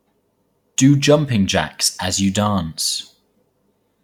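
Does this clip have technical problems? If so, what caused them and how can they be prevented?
No, the recording carries through without any audible technical fault, so there is nothing here that needs preventing.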